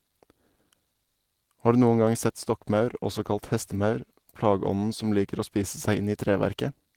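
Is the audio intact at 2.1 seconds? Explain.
Yes, the speech at 2.1 seconds is intact, with no audible dropout, click, distortion or other fault at that moment.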